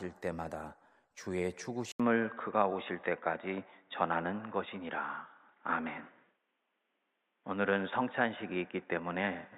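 Input switched to a poorer device at 1.92 s, likely a change of microphone or headset profile: after an 80 ms silence the speech turns dull and boxy, band-limited to 3.8 kHz, with a level shift of about 5 dB and a faint new noise floor to the end.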